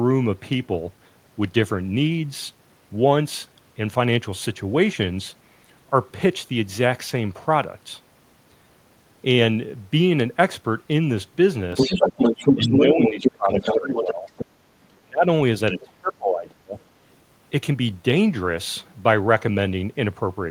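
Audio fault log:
11.77–12.85 s, 13.03–13.32 s, 13.53–14.46 s, 15.80–15.85 s, other side's voice leaking through: the echo canceller likely failed to remove the loudspeaker signal from the microphone, so a second voice comes through. It is about as loud as the talker in the first two stretches, slightly quieter in the third, and only a faint trace at 15.80 s.
12.54–14.3 s, 15.01–15.28 s, 15.72–16.77 s, speech suppressed in double talk: with both sides talking at once, the echo canceller likely could not separate the talker from the echo and turned both down. The talker dips by about 15 dB for roughly a second and a half in the first stretch, then by about 30 dB in the two later stretches.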